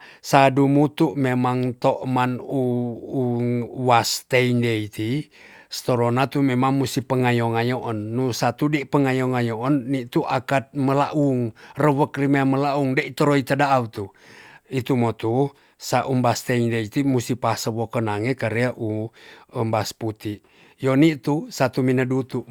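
No audible faults are present anywhere in the recording.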